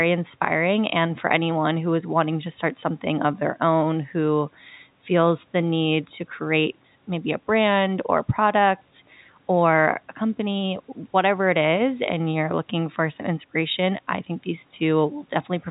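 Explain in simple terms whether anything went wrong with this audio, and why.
Nothing went wrong with this audio, because everything you hear is simply how it was recorded and sent.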